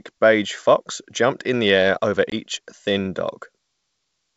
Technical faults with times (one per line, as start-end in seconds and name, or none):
2.30-2.34 packet loss on an ADPCM call